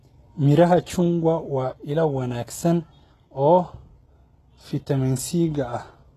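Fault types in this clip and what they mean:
HE-AAC compression: The speech was likely encoded at a low rate with HE-AAC, which fits about 16 kbps. Its treble is rebuilt from copied lower bands instead of being coded, so s sounds come out plainly gritty and lispy, with nothing above 12.3 kHz.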